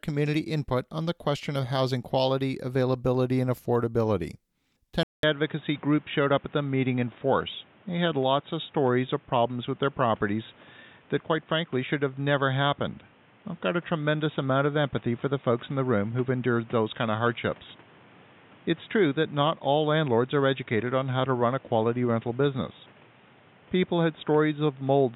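At 5.03 s the speech drops out for about 200 ms, then returns duller and boxier through to the end, with nothing above 3.8 kHz and a new background noise floor roughly 30 dB below the voice while the level stays about the same. The likely cause is an input switched to a poorer device. A spectrogram shows the upper band cut off sharply at that point, and the waveform shows a brief flat gap.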